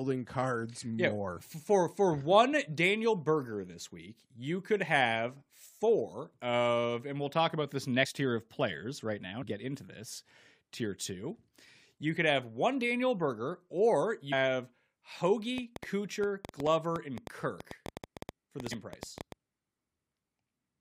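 At 8.05 s, 9.42 to 9.44 s, 14.32 s and 18.70 s, compressed frames skipped: whole 23.2 ms frames go missing, so the speech jumps ahead by about 70, 100, 400 and 150 ms.

From 15.58 to 19.33 s, a train of clicks runs over the speech at an irregular rate of about 7.5 per second, around thirty in all, peaking roughly 10 dB above the signal. It is heard as uneven ticking, likely from electrical interference or a faulty connection.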